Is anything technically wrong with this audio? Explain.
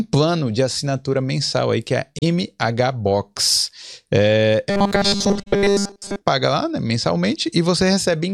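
Yes. Two kinds of fault are present.

At 2.19 to 2.23 s and again at 5.42 to 5.48 s there is a corrupt frame concealed. Each damaged stretch of about 50 ms, which fits two frames, is covered by muting or by a sign-scrambled copy of the last good spectrum.

From 4.70 to 6.21 s, ending just before "lá né", there is robotic sound from repeated short buffers. The sound becomes a rigid metallic buzz at 200 Hz. That pitch is likely caused by a roughly 5 ms buffer being replayed in place of most of the real audio. A steady imposed pitch like this sets it apart from an ordinary stutter.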